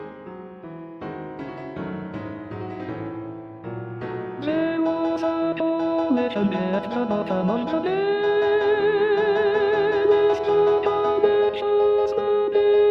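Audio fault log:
No faults heard.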